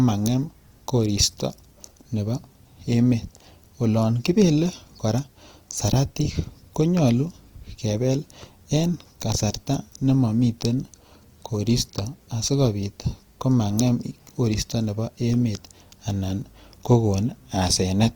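Throughout, the speech sounds grainy and rough, with a noisy, fizzy texture in place of clean harmonics, likely from Opus compression at a low rate near 24 kbps in its music mode. A spectrogram would show bands filled with smeared noise, with content reaching 20.4 kHz.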